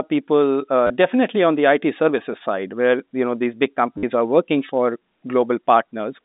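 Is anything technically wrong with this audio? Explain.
Yes. There is packet loss with the last packet repeated at 0.87 s, just before "definitely on the", for 30 ms, and at 3.98 s, between "you know these big" and "are working for", for 50 ms. The receiver replays the last packet, so each gap becomes a robotic stutter that buzzes near 100 Hz, which fits 10 ms packets, rather than a silent dropout. This all sits within the narrow telephone band of the G.711 line.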